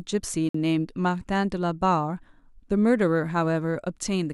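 At 0.49 s the speech drops out for about 55 ms, ending at 0.55 s. This is a gap between stream segments: adjacent segment timestamps left a gap that playback filled with silence, giving a hard-edged hole. Nothing is lost, but the timeline is stretched.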